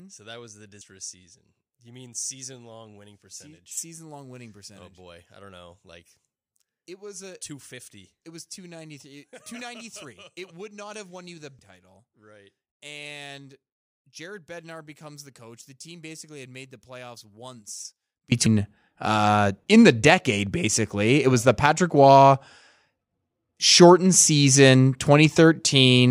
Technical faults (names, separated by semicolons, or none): one channel inverted; damaged data in a compressed stream